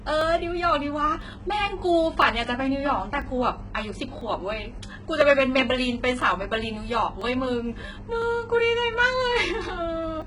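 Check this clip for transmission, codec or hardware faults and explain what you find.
Two problems here. Throughout, the treble sounds synthetic and gritty, with nothing above 11.1 kHz; that's likely heavy HE-AAC compression at a very low bitrate, around 12 kbps, rebuilding highs from copied lower bands.

From 0.21 to 10.22 s there are periodic USB or driver dropouts, roughly every second. Each one skips a couple of milliseconds, so you hear a regular tick.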